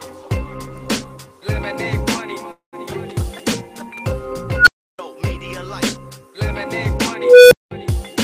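At 2.51 s packets were likely held up in transit, starving the jitter buffer: a call audio freeze. The last sound stretches into a fading buzz, then about 110 ms of silence, a 213 ms gap before playback resumes where it stopped, later by that amount.

At 4.55 s and 7.11 s a recursive filter with bad coefficients runs away, an unstable filter. A tone around 1.5 kHz swells over 116 ms and clips, cutting to 320 ms of silence. Then a tone around 500 Hz builds more slowly, over 0.41 s, before 200 ms of silence.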